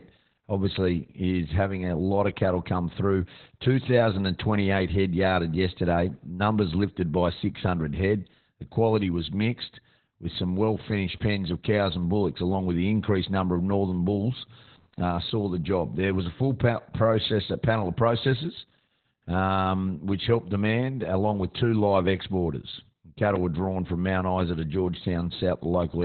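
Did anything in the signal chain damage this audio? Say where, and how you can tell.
Yes, at the codec stage: Opus voice compression, heavy, across the whole clip. The speech stops dead above 4.3 kHz, and the narrowband SILK linear-prediction coder points to a rate around 8 kbps. At that rate the excitation is coded coarsely, which leaves the voice muffled, hoarse and slightly robotic. A simple low-pass filter or an analogue phone line would dull the top end but keep the voice's texture clean, without this buzzy, grainy roughness.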